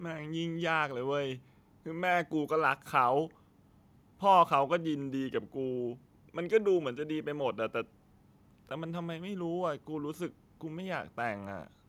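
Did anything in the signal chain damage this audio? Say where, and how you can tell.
No, nothing along the way seems to have damaged this speech recording, so there's no stage to point at and nothing to flag.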